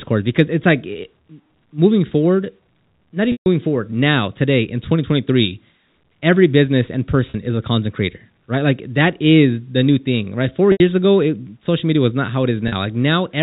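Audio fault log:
3.32–3.46, 7.30–7.34, 10.72–10.80 and 12.68–12.72 s, packet loss with pitch repetition: audio drops out for 140, 40, 80 and 40 ms (the second between "every business and" and "is a content creator", the third just before "ago it social media", the last after "media was not how"), and the receiver loops the last pitch period to bridge each gap. The short ones come across as a brief buzzy hold. The 140 ms one fades toward silence before the speech cross-fades back in. All of this rides over narrowband telephone-coded audio.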